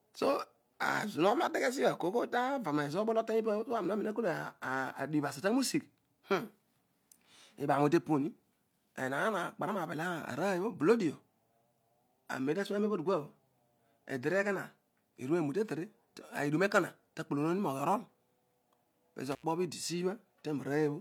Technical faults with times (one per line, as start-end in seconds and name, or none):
19.32-19.43 intermittent contact